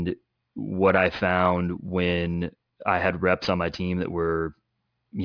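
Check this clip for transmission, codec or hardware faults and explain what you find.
Aliasing runs through the whole clip of speech. The sample rate was cut, which fits a drop to about 11 kHz, without an anti-alias filter, so content above 5.5 kHz folds back below it at roughly 25 dB under the speech. Sibilants turn gritty and metallic, crowding the 5.5 kHz edge, where plain band-limiting would only sound dull.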